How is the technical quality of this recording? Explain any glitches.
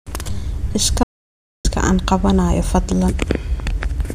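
There's one clear glitch: an audio dropout to silence from 1.03 to 1.65 s. The speech cuts off mid-flow and drops to silence, no room tone at all, for about 0.6 s. Likely the input briefly disconnected or muted while the recorder kept writing silence, so whatever was said there is simply gone.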